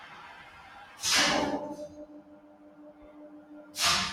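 A noise suppressor tuned for speech was left active on this sound, treating its steady parts as noise. Throughout the clip its gain rides up and down, swinging the level by something like 15 dB, so sustained material pumps and thins while sharper onsets pass through.

From 2.23 to 3.02 s the suppressor cuts the sound harder, pulling it down by up to about 6 dB for most of that stretch. It happens again from 3.42 to 3.75 s, briefly sinking the level.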